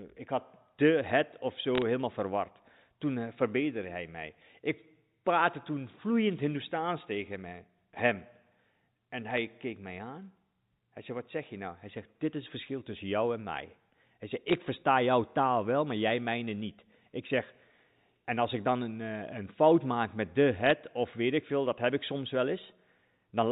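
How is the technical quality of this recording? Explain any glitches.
It's a telephone-band recording, with nothing above 4 kHz as you'd expect from G.711 coding, and there are four short bursts of trouble.

Bit errors on a digital phone line show up at 1.75–1.82 s just before "helemaal verward", at 9.31–9.38 s just before "keek mij aan", at 14.48–14.54 s, and at 20.66–20.71 s between "fout maak met de" and "of weet ik veel". Roughly one or two bits per thousand get flipped, and each flip corrupts a single sample. When a high-order bit, or the sign bit of a loud sample, is hit, that sample jumps far off, so you hear brief sharp ticks and crackle over the speech.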